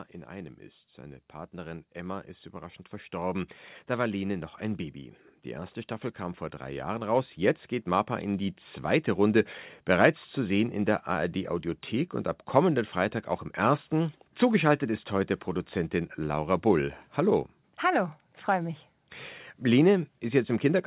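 From 0.28 to 5.06 s the level climbs by about 8 dB, and from 6.18 to 9.47 s by about 5 dB: automatic gain rising, where the gain control judges the input too quiet and slowly turns it up. The voice and the background swell together over several seconds, heard through a narrow telephone-like band. The long, steady rise that lifts the noise floor too is what separates it from a sudden level jump or a fast compressor pump.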